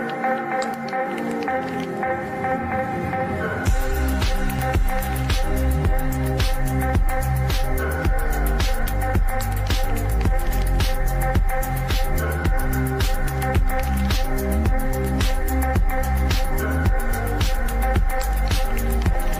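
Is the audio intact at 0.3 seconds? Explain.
Yes, the audio is intact at 0.3 seconds, with no fault audible at that point.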